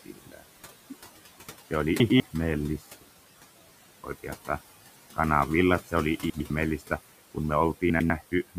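Speech clip, with noise suppressor artifacts throughout: the suppressor pulls the steady room noise, which sits about 16 dB below the speech, down by about 16 dB frame by frame, so the background dips in pauses and swells back under speech. At 0.04–0.43 s the noise suppressor cuts speech, mistaking the opening sounds for noise and lowering them by up to about 17 dB across roughly a third of a second, so the start sounds swallowed and faint. Chunks play out of order at 2.0–2.2 s, 6.3–6.5 s and 7.9–8.1 s. In each span a 100 ms chunk arrives one chunk late and plays after the chunk that should follow it, giving a brief jumbled stretch with hard joins.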